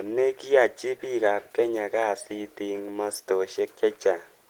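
No technical faults can be heard anywhere in the signal, which stays steady and intact throughout.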